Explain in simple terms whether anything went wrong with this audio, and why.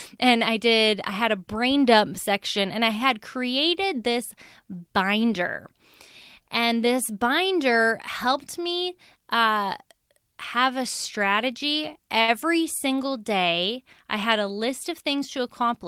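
Two things went wrong, both in how the audio was delivered over the network.

At 12.21 to 12.30 s there is a short stall from a late packet. A piece of audio arrived late, so the receiver held the last sound for about 66 ms while it waited. Nothing is lost, but that moment of speech drags slightly.

From 14.68 to 15.84 s there is a jitter buffer speed-up. The receiver had too much audio queued, so it trimmed away tiny slices, roughly a twentieth of a second in total. The speech runs about 4% faster at the same pitch.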